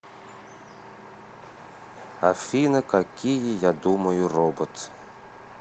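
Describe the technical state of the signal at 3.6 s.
At 3.6 s the speech sounds hurried but keeps its pitch, running about 9% fast. This is a jitter buffer speed-up from 2.23 to 4.28 s: to shrink a backlog, the receiver repeatedly cut out pitch-period-length pieces, removing about a fifth of a second in total.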